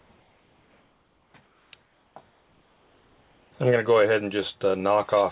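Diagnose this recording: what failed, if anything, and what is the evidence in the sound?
In the quiet gaps at 0.0–0.1, 0.2–1.34, 1.46–1.72, 1.82–2.16 and 2.3–3.52 s, the background becomes a flat, detail-free hiss about 3 dB lower, capped at 4 kHz. This is likely comfort noise in place of the background: discontinuous transmission stopped sending, and the receiver synthesised shaped noise.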